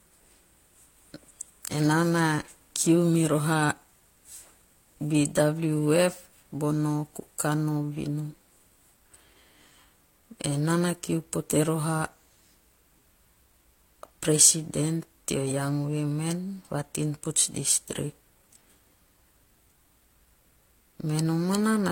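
At 15.00 to 15.05 s, just before "young women va tinputz", a corrupt frame was decoded. Damaged bits misplaced energy across about two frames, giving a brief chirp, squeak, blip or burst of noise, with its error peaking around -35 dBFS.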